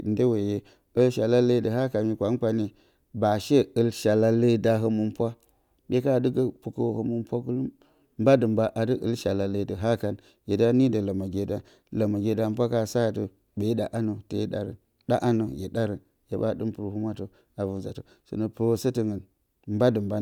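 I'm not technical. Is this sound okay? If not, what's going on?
Yes, this recording sounds fine, and there's nothing going wrong in it that you need to worry about.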